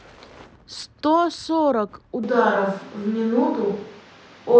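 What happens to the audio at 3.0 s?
At 3.0 s the recording has most likely lost its close microphone and is picking up the sound from a distant microphone instead, a switch that happens abruptly at 2.24 s and lasts to the end. The speech turns roomy and hollow, with thinner bass, and background noise about 30 dB below the speech. The overall level stays roughly the same, so the change is heard in tone and space rather than loudness.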